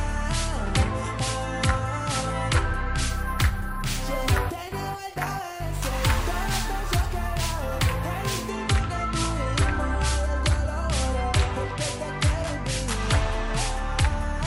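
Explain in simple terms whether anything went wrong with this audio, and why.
From 3.09 to 8.49 s there is imaging from sample-and-hold upsampling. The rate was doubled, which points to a 24 kHz source, by repeating each sample without smoothing. Mirror copies between 12 and 24 kHz add a metallic fizz that rises and falls with the sound, unlike steady hiss.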